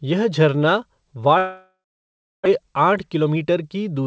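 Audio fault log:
1.38–2.48 s, long network dropout: just after "यह झरना" the sound smears into a fading buzz, then silence; likely packets stopped arriving and about 0.66 s was lost.
2.59–3.60 s, jitter buffer speed-up: speech sounds hurried at unchanged pitch, running 8% fast as the receiver trims short pitch-period pieces to drain the buffered backlog.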